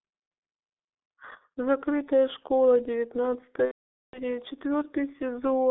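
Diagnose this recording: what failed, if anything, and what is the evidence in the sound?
Codec stage: the whole speech clip is muffled and hoarse, squeezed into a 300 Hz to 3.5 kHz band with smeared consonants, which fits a G.723.1 codec at about 6 kbit/s.

Network stage: from 3.66 to 4.24 s there's VoIP packet loss concealed by the speech codec. The decoder stretches the last sound into a fading buzzy tone or coloured noise, which suggests around half a second of lost packets.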